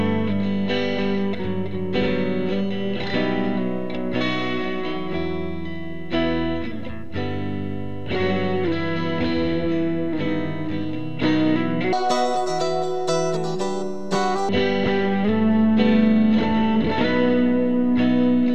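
From 11.93 s to 14.49 s, the audio is read two samples at a time, giving double speed. The reader treats each pair of samples as a single frame. It acts as if the data had two channels or wider samples. So the passage plays at twice the speed and sits a full octave, 12 semitones, higher.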